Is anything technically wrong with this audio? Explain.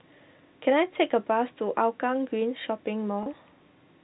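Yes. From 3.23 to 3.26 s, packet loss with pitch repetition: 30 ms of audio went missing, and the receiver repeated the last pitch period to fill the gap, so the voice briefly holds with a slight buzz.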